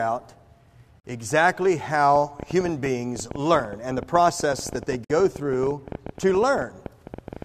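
Separately encoded pieces, about 4 s long, were joined without trimming their padding, leaving a gap at a join of encoded pieces: a 44 ms silence at 1.0 s with smeared edges before the sound resumes. From 2.16 s to 7.43 s, a train of clicks, likely interference or a faulty connection, lays roughly 70 similar ticks over the sound at an uneven pace of about 11.7 per second, peaking a little above the sound's level. At 5.04 s the next join between pieces leaves another gap, this one 53 ms long.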